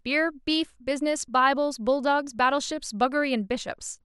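A short speech recording with no audible technical faults anywhere in the signal.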